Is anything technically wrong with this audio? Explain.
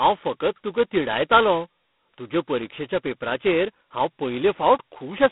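Yes. Throughout the speech, G.726 ADPCM coding spends only two bits per sample on its prediction error, which fits 16 kbit/s, leaving a harsh, rasping hiss that tracks the level, with nothing above 3.8 kHz.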